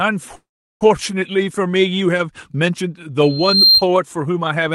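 Right near the start, from 0.35 to 0.83 s, there's a call audio freeze. The last bit of sound smears into a brief fading buzz, then goes quiet for about 0.37 s before the speech picks up exactly where it stopped. Nothing's lost, it just lands about 0.46 s late. It's likely packets got held up and the jitter buffer ran dry.

Later, from 3.22 to 3.85 s, you get a loudspeaker feedback squeal. A single 4.2 kHz tone swells up over roughly 0.4 s to sit around 10 dB above the speech. The mic is catching its own loudspeaker, and at that frequency the loop gain tops one.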